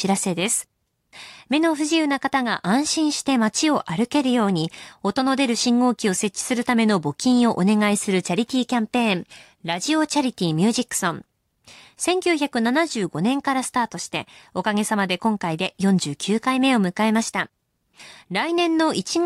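No technical faults are audible.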